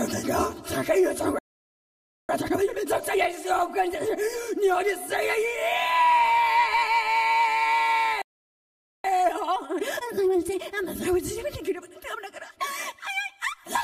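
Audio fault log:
1.39–2.29 s, playback stall: the sound cuts to silence for about 0.90 s, then resumes. That points to the player likely running out of buffered data.
2.29–3.19 s, time-compressed catch-up: the resumed sound runs at double speed with its pitch unchanged, as small pieces are cut and cross-faded to clear the backlog. A plain speed-up would raise the pitch.
8.22–9.04 s, playback stall: a second silent hold of about 0.82 s, which is likely another buffer underrun.
9.04–10.68 s, time-compressed catch-up: this time the sound is hurried at 1.5 times speed over a longer stretch, with steady pitch.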